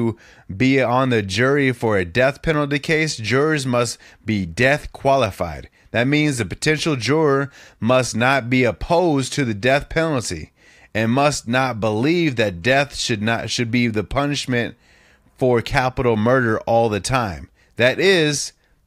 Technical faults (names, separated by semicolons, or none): dropped samples